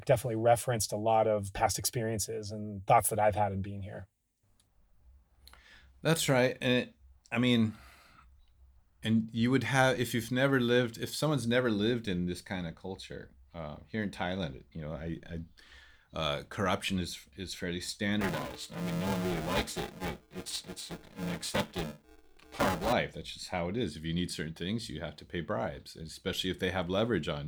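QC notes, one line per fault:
18.21–22.93 s, buffer tearing: starting right after "corruption is is fairly", the speech takes on a robotic buzz at 375 Hz that lasts until the fault clears and is heard only while sound is present. The writer and reader of the ring buffer have drifted out of step, so about half of each buffer repeats audio from roughly 5 ms earlier, with abrupt joins at each crossing. The 375 Hz rate fits a 128-sample buffer at 48 kHz.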